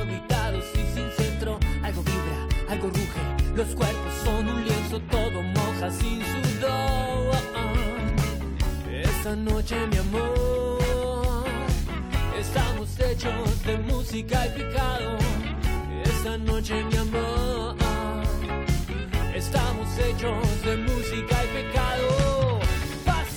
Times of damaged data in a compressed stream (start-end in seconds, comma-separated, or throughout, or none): 15.76